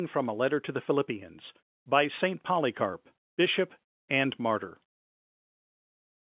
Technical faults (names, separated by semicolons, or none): none